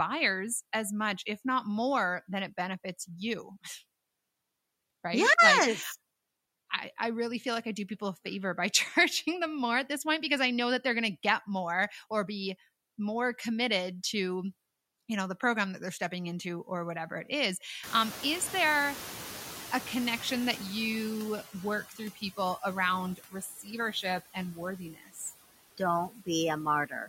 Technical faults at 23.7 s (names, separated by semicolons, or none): noise suppressor artifacts; speech cut by the noise suppressor